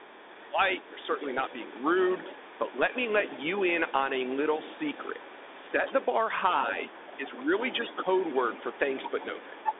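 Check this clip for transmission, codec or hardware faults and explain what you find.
Three faults are present: a narrowband headset codec throughout, a second voice leaking in, and short dips in the main talker's level.

Bluetooth CVSD headset codec, throughout: one-bit delta coding whose adaptive step fits a 64 kbit/s link limits the speech to roughly 250 Hz to 3.6 kHz, with nothing above 3.8 kHz. Fast, bright sounds outrun the step, so sibilants turn scratchy over a grainy hiss.

Other side's voice leaking through, 0 to 6.07 s and 6.57 to 9.79 s: a second voice sits about 20 dB, then about 15 dB, below the main speech. It is likely loudspeaker playback that the echo canceller failed to remove from the microphone.

Speech suppressed in double talk, 0.22 to 1.1 s, 5.71 to 5.76 s and 7.17 to 7.52 s: the main voice dips by up to about 10 dB in the first span and about 5 dB in the other two, for roughly 0.4 s, 50 ms and 0.3 s. 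The likely cause is the echo canceller attenuating everything while both sides were talking at once.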